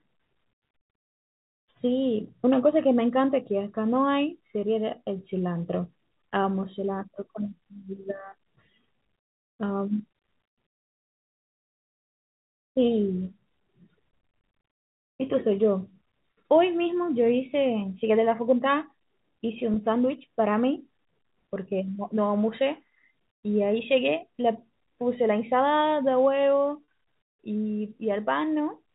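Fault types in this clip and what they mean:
Packet loss with pitch repetition: brief gaps were bridged by looping the last pitch cycle. Near 19.74 s and 26.84 s the speech holds a short, buzzy tone of 20 and 40 ms rather than falling silent, clicking, or repeating whole syllables like a stutter.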